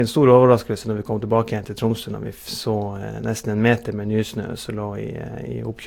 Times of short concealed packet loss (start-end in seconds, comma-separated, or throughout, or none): none